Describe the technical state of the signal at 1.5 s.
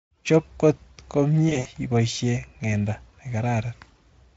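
Packets dropped between 1.49 and 1.69 s, with about 100 ms lost across 160 ms and the longest gap 60 ms. In this VoIP packet loss concealed by the speech codec, the Speex decoder extrapolates its last pitch and filter at falling gain, smearing the sound into a fading buzz or coloured noise.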